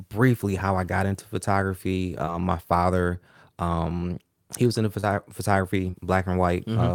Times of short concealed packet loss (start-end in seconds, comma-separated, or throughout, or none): 2.25-2.29, 5.01-5.05, 5.91-5.95